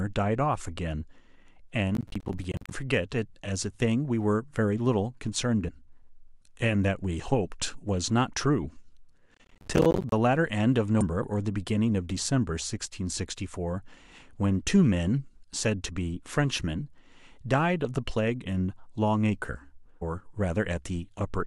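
From 1.95 to 2.71 s the processor falls behind and misses many short audio deadlines in a row, which fits buffers of around 10 ms. Each missed buffer drops out to silence with hard edges, so the speech tears into a gritty processor overload crackle. Inside that stretch, at 2.54 s, damaged data in the compressed stream makes the decoder lose sync and search for the next frame. The same corruption returns as short blips at 5.67 s and 11.01 s. Between 9.34 and 10.12 s the overload comes back, with even more missed buffers of silence crackling over the speech. A final damaged-frame blip lands at 20.01 s.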